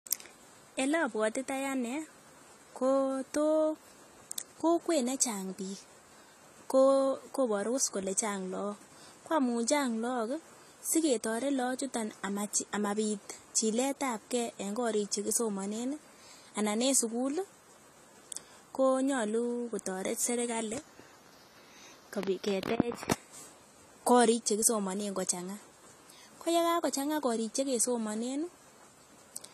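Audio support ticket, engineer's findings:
Speech band-limited for the whole clip, nothing above 14.1 kHz, with low-bitrate codec artefacts. Likely low-bitrate audio saved at a high bitrate: a low-rate AAC-style encode re-saved as high-rate MP3, which cannot restore the discarded detail.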